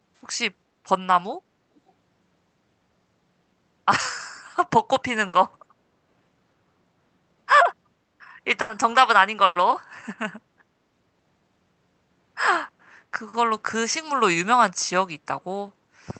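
A speech recording with two kinds of fault. From 1.76 to 1.9 s a very faint, delayed double of the speech surfaces, trailing the original by about 440 ms. This is likely an echo leak: a loudspeaker's output reached the far microphone and slipped past the echo canceller. Three bursts of packet loss follow, at 5.27 to 5.35 s, 8.61 to 8.71 s and 9.45 to 9.57 s. In each, the sound is continued as a briefly held buzz or fading hiss lasting 60, 80 and 100 ms respectively. The speech then resumes with that stretch missing, because the receiver stretched the last audio it had over packets that never arrived in time.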